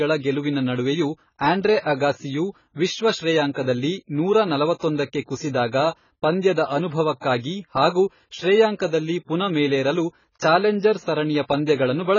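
Throughout, the speech is dull and cut off above 7 kHz, with a warbling fizz that plain low-pass filtering wouldn't cause. This is likely heavy AAC compression, consistent with 16 kbps.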